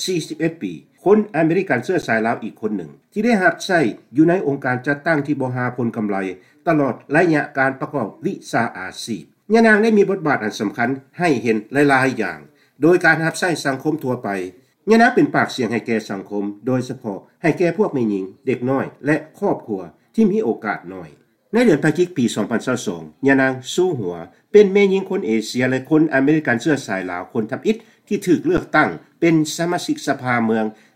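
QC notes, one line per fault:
2.02 s and 28.57 s, underrun with held sample: output ran dry for about 10 ms, waveform freezes flat, then the stream jumps past the skipped audio.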